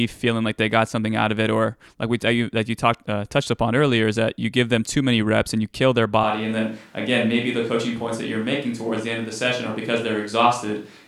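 From 6.2 s to the end, the speech abruptly turns roomy and hollow, with less bass and about 5 dB less level. This is a switch to a distant microphone, likely replacing a failed close one. The waveform steps down, and the spectrogram thins in the lows and fills with faint room noise.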